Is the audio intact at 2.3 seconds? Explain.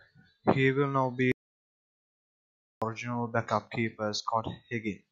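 No. An audio dropout to silence runs from 1.32 to 2.82 s after "will now", likely a lost input while silence was written: dead silence without room tone, unlike a natural pause.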